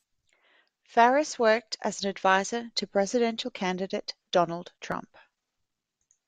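At 4.92 s the speech has an overlapping-chunks fault. The audio was handled in 2.0 s blocks, and at this join the new block begins slightly before the previous one finished, so a short slice of about 7 ms is played twice in succession. The duplicated fragment breaks the continuity of the waveform, and it is heard as a brief click or tiny stutter at the boundary.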